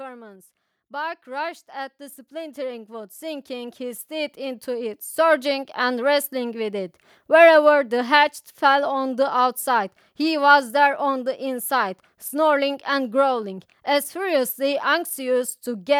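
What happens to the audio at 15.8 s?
At 15.8 s the speech carries on without interruption, and there is no fault at that moment.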